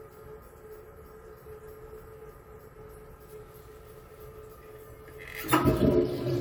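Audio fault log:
No technical faults can be heard anywhere in the clip of sounds, and the signal holds steady throughout.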